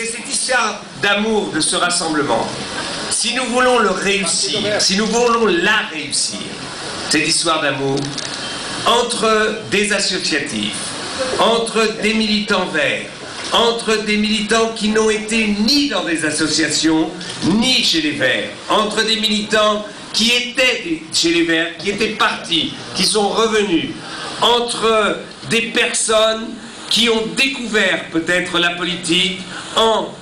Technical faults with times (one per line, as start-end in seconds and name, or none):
0.00-30.22 filter restarted on every block